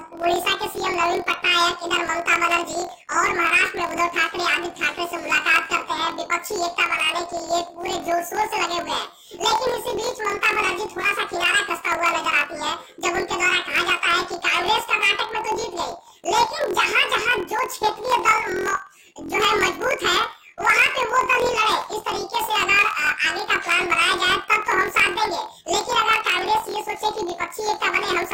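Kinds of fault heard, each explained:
Planar audio read as interleaved: Each block stores all left samples, then all right, but is read as alternating pairs. Every 23.22 ms block plays twice at double speed, which fits 1024-sample blocks. The whole clip sounds an octave high, with a 43.1 Hz flutter.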